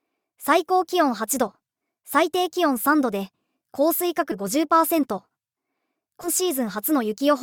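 At 4.31 to 4.34 s the audio lurches forward, losing around a fifth of a second, and at 6.23 to 6.28 s it jumps again by a shorter stretch. Both are compressed frames skipped: whole frames never reached playback, and the losses fit multiples of a 20 ms frame. Unlike a dropout, no silent gap appears.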